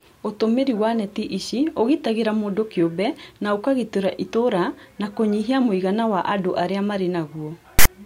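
A speech clip that ends with a harsh, hard-edged burst of rasping static from 7.79 to 7.86 s, lopsided rather than centred, with dead silence where the padding falls. This is file tags played as audio: a text tag block decoded as samples, with its zero padding giving the silence.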